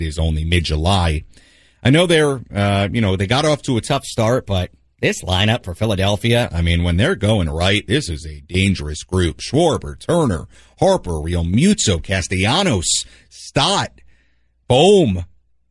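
From 3.88 to 6.43 s, after "got off to a", a wrong sample rate plays samples about 1.09 times too fast, raising speech roughly 1.5 semitones, hurried and high, until "I mean when they're".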